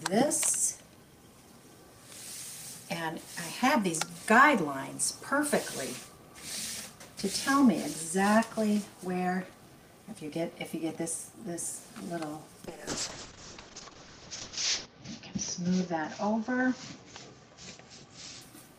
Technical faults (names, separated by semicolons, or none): call bitrate drop